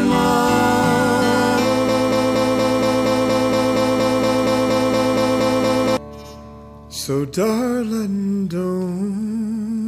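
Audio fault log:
1.89–5.97 s, broken-record loop: a 0.23 s fragment repeats exactly, back to back, 17 times, and the audio due in that span never plays. The likely cause is a stalled player, encoder or stream that kept resending the last fragment it held.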